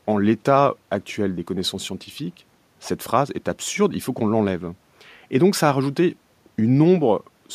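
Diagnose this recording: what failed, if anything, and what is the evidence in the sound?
Nothing in the speech signal points to a failure at any stage of the chain, from the analogue front end and conversion through processing, transmission, storage and playback.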